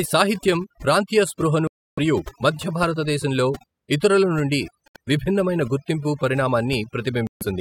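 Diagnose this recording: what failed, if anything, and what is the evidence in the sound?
Overdone noise removal, applied in processing before the recording reached its final form, runs through the whole speech clip. The background between phrases drops to near silence, broken by brief tonal specks where isolated frequency bands flicker back above the gate. The reduction was set so hard that quieter speech components near the noise estimate were cut along with the noise.

The three short silences are likely Bluetooth dropouts on the playback link. The first runs from 1.67 to 1.99 s, right after "సాహిత్యం ప్రాంతీయ". The second runs from 4.88 to 4.96 s, between "భారతదేశంలో ఇతరుల నుండి" and "విభిన్నమైన గుర్తింపు". The third runs from 7.27 to 7.43 s. In each, the speech resumes further along rather than where it stopped. That fits audio packets arriving too late and being discarded while the stream clock kept running.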